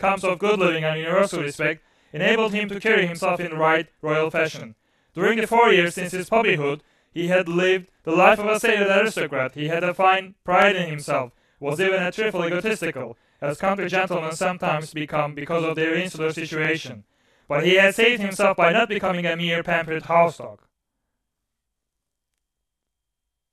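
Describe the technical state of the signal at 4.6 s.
Overlapping chunks at 4.60 to 4.62 s: a new processing block, on roughly 6 s boundaries, begins before the previous one has finished, so about 25 ms of speech plays twice at the join. This is heard as a brief stutter or click.

Channel delay (doubling) runs through this moment as well. One channel trails the other by 40 ms, and when the two are summed to mono the late copy stands apart, giving the speech a doubled, slap-echo quality at equal level.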